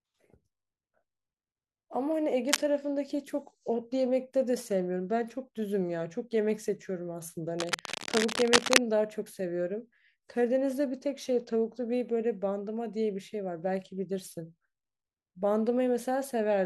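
Cable scratch noise hits at 2.49–2.67 s and 7.59–8.79 s: rasping bursts about as loud as the speech, likely a worn connector shifting, showing as ragged broadband smears and jagged waveform spikes.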